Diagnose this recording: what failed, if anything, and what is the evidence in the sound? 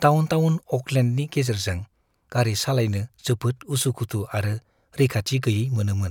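Nothing in the signal chain has failed: the speech signal is continuous and intact, with no breaks, level jumps, distortion or timing disturbances at any point.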